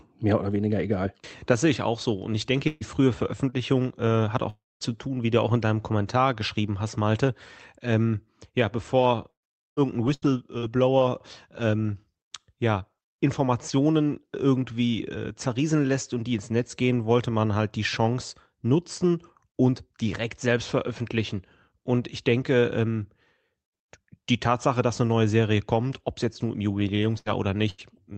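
Speech carried over a call link whose Opus coding tops out near 8 kHz has several network faults. A burst of packet loss at 2.67–2.84 s, 27.18–27.29 s and 27.70–27.81 s removes roughly 120 ms, 80 ms and 80 ms. Each time the receiver extends the last sound as a fading buzz or hiss before the audio resumes further along. A lost packet rebuilt from error correction appears at 2.81–2.85 s, 4.81–4.85 s, 27.26–27.30 s and 27.78–27.82 s, and twice after "es jetzt nur im", at 26.78–26.82 s and 27.02–27.06 s. Each is a 40 ms stretch where the decoder played the lower-quality backup copy carried in the next packet, so nothing drops out but the sound turns briefly rough and noisy. A jitter buffer slow-down runs from 3.35 to 4.97 s, ending just before "wie du auch in". The receiver repeated small pitch cycles to rebuild its reserve, adding 36 ms and stretching the audio to 98% speed at unchanged pitch. 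Inside it, a short concealed packet loss at 3.50–3.56 s loses 40 ms, which is patched by continuing the preceding sound, giving a brief smear. At 4.50–4.84 s the sound fades out and goes quiet for about 220 ms, with 320 ms lost, likely a long network dropout. Repeated packet loss (robotic sound) spans 8.98–11.02 s. Four gaps, the longest 112 ms, are each filled by extending the previous sound, about 15% of the span, making it choppy, and a further fifth of a second or so comes from rough error-correction copies.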